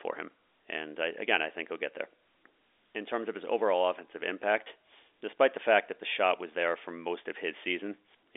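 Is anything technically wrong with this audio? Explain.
Yes. At 4.64 to 4.66 s, between "of his overall offensive" and "despite the fact that", packet loss with pitch repetition is audible: about 20 ms, consistent with a single lost packet, filled by a repeated pitch period. It sounds like a brief buzzy hold rather than a silent dropout. The narrowband telephone band from G.711 coding is audible throughout and is not itself a fault.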